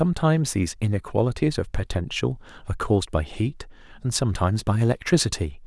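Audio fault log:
Nothing to log here; the speech comes through without any faults to note.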